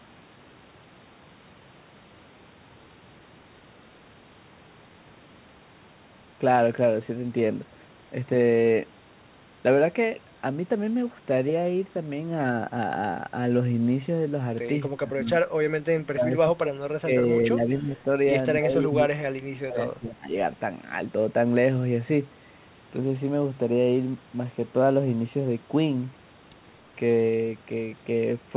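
Between 14.96 and 20.33 s the speech repeatedly sinks in level, likely speech suppressed in double talk: at 14.96–15.34, 15.92–17.29, 17.54–18.0 and 18.59–20.33 s it ducks by up to about 25 dB, leaving chopped, hollow patches. The waveform shows notched envelopes, and the spectrogram shows faded bands.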